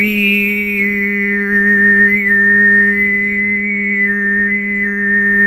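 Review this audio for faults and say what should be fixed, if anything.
Nothing stood out on listening, so there is nothing here that needs fixing.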